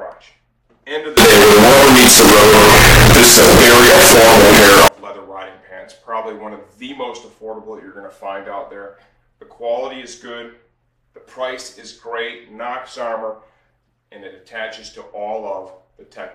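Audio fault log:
1.17–4.88 s, float read as integer: the sound turns very loud, harsh and nearly square at an almost fixed, high level, likely from 32-bit float samples decoded as 32-bit integers.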